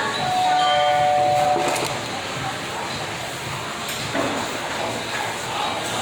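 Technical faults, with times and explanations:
No technical faults are heard in this sound.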